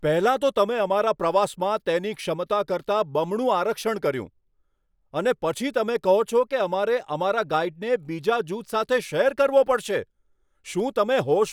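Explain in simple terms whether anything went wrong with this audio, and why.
Nothing went wrong with this audio, because no fault can be heard anywhere in it.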